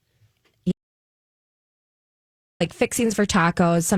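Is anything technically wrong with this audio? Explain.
Yes. From 0.72 s to 2.60 s the speech cuts off abruptly into an audio dropout to silence lasting about 1.89 s. The input was likely lost while recording continued, writing silence. Unlike a natural pause or gated quiet, even the room tone vanishes.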